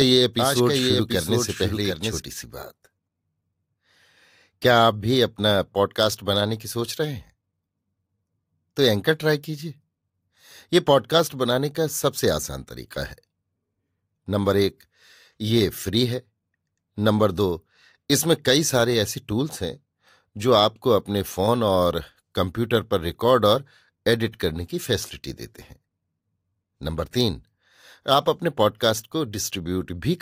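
It's a speech clip, and right from the top there's a doubled audio track: a second full-band copy of the speech trails the original by around 0.7 s, sitting maybe 5 dB down, with no decay or room colour on it. It's already running when the clip begins and cuts off abruptly at 2.2 s. That's likely a slower second capture path or an edit leaving two out-of-step copies stacked.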